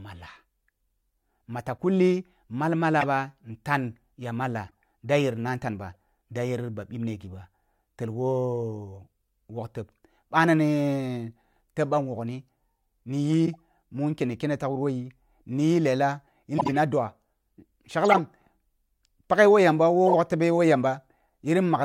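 Speech with corrupt frame decoded glitches at 1.78, 3.01–3.06, 4.68–4.71, 5.95, 13.46–13.55, 16.58–16.75, 18.09–18.15 and 20.07–20.11 s. Damaged compressed frames played anyway throw out chirps and noise blips, mostly faint early on and quite loud later.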